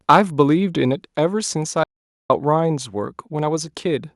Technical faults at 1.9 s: audio dropout to silence

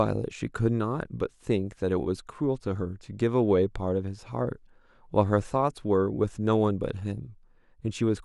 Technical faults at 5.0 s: none

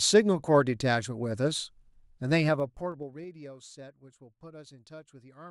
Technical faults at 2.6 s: zipper noise

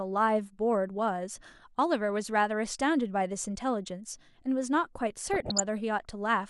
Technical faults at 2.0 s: MP2 compression

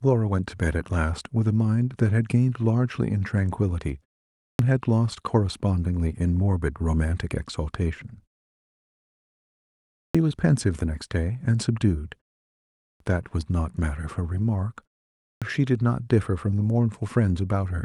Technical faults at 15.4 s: clipped start after a pause

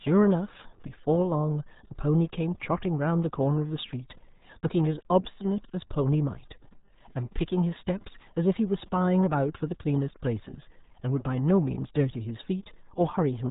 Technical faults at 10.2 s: RealAudio 14.4 codec

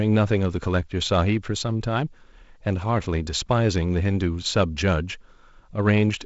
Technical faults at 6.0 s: none

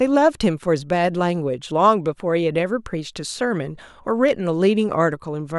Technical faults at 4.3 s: loud pop

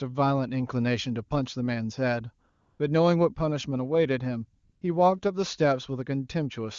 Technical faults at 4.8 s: AMR comfort noise

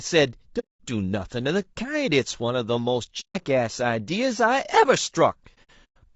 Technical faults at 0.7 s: low-delay AAC compression; AAC frame loss with muting

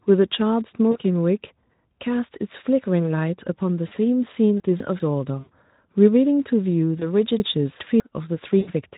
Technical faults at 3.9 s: VoIP packet loss concealed by the speech codec

